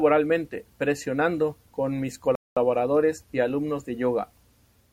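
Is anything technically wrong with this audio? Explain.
Yes. A rebuffering stall at 2.35 to 2.57 s, right after "presionando con mis": playback ran out of buffered data, fell silent for 0.21 s, then resumed exactly where it stopped.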